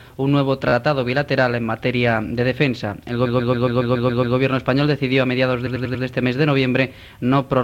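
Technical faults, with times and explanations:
0.68–0.73 s, 3.25–4.36 s and 5.65–6.03 s, repeated frames: the sound stutters as blocks of 14.5, 129 and 93 ms replay 3, 8 and 4 extra times, because a run of compressed frames was decoded more than once, lengthening the audio.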